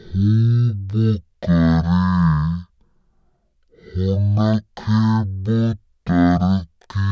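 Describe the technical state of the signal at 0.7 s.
At 0.7 s the audio is being played back far slower than it was captured, a wrong sample rate fault that runs through the whole clip. The ratio fits 44.1 kHz material played at 16 kHz with no conversion. Speech runs at 0.363 times normal speed, dropped about 17.6 semitones, so it sounds deep, dragged and sluggish.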